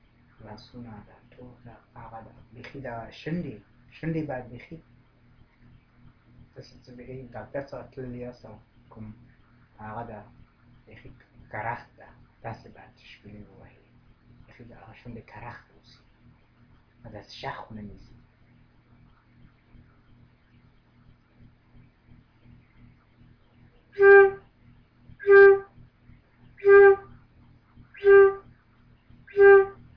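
No technical fault can be heard anywhere in the signal.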